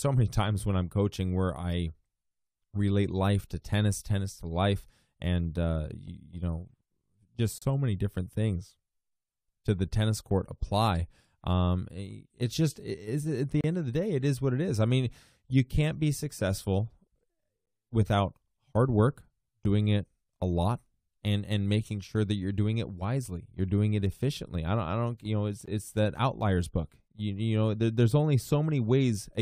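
Three brief silences interrupt the speech: 7.58 to 7.62 s (36 ms), just before "so many different things"; 13.61 to 13.64 s (32 ms), between "just is at the" and "end of the day"; and a shorter one of 18 ms at 25.66 s, after "don't you know it's". Each is a gap between stream segments. Timestamps at a segment boundary, which fits segments of about 2 s, leave a hole that the player fills with hard-edged silence. Unlike a dropout, nothing is lost, and the speech resumes exactly where it stopped.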